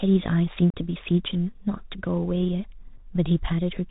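From start to finish the speech runs through the Bluetooth CVSD headset codec. The sound points to a 64 kbps link. CVSD codes each sample as one bit, a step up or down, and adapts the step size. Nothing above 4 kHz survives, so the speech sounds narrow. The damage is plainly audible. Loud high sounds outrun the step and distort. S sounds turn scratchy. A granular hiss sits beneath everything.

At 0.70 s comes unconcealed Bluetooth headset packet loss. About 37.5 ms of audio is gone, several packets in a row. Nothing fills the gap, so the speech drops into a hole with hard edges. The speech then returns briefly quieter. At 2.97 s a second, shorter loss removes about 7.5 ms, a single packet. It is heard as a brief, abrupt break.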